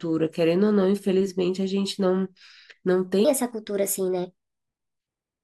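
A section at the wrong speed runs from 3.25 s to the end at 5.43 s, playing 1.23 times too fast. Pitch and tempo rise together, so the speech turns high and hurried, about four semitones up, likely from playback against a mismatched clock.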